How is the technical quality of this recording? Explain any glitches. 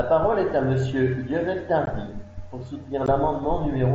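The recording has two brief dropouts from unconcealed Bluetooth headset packet loss, on a wideband mSBC headset link that band-limits the speech to 8 kHz and adds a light grain.

At 1.86 s and again at 3.06 s, about 15 ms of speech is missing. Audio packets between headset and phone never arrived, which fits two lost frames each time, and nothing filled the hole. The result is a tiny hard-edged gap, not the smeared or repeated sound of concealed loss.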